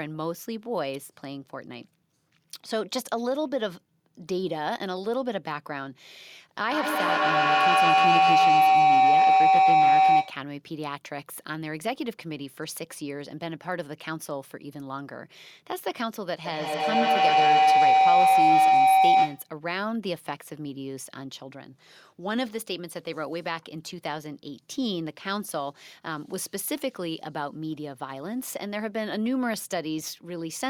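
A speech recording with two bursts of feedback howl, from 6.69 to 10.46 s and from 16.45 to 19.51 s. Each swells into a ringing tone near 700 Hz that pulses about every 150 ms and peaks about 10 dB above the speech. Two devices in the same room are on the call, so each pass from microphone to loudspeaker and back adds gain, and the narrowing tone grows until the loop is broken.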